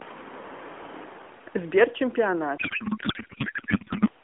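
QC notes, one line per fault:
2.58 to 4.09 s, codec payload misread: the speech abruptly gives way to garbled noise and warble that barely tracks it. The decoder is taking frames that look valid but pulling each field from the wrong bit position, so it rebuilds nonsense excitation and filter settings. The sound suggests octet-aligned AMR payloads being unpacked as bandwidth-efficient. Before this the narrowband AMR sound is only lightly damaged, consistent with a 12.2 kbps mode.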